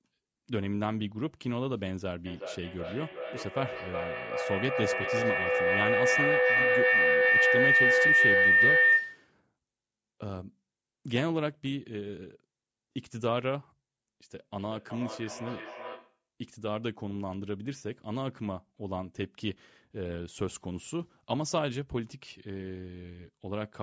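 From 2.26 to 9.34 s, a feedback howl: two devices sharing the room and call gain level around the loop, building a tone near 2 kHz, with a loop delay of roughly 0.4 s, about 10 dB above the speech. From 14.57 to 16.28 s, feedback echo between two devices: one device replays the other's microphone, so the speech returns roughly every 0.4 s, thinner and ringing, about 9 dB below the speech.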